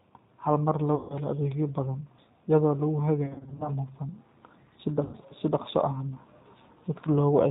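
Throughout, the speech sounds slightly rough and synthetic with nothing above 4 kHz, the plainly audible damage of a G.729 codec at what sounds like 8 kbit/s. At 0.95–1.17 s, 3.24–3.72 s (in short scattered gaps) and 5.04–5.17 s, it smears into a fading buzz or coloured noise: VoIP packet loss concealed by the speech codec, which extrapolates the missing frames.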